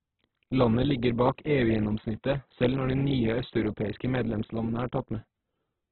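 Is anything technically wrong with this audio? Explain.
Yes, there's heavy codec damage across the whole clip. It's likely Opus compression: the bandwidth has narrowed so nothing survives above 4.3 kHz, and bands refilled with noise make the speech rough and grainy, which fits a bitrate around 8 kbps.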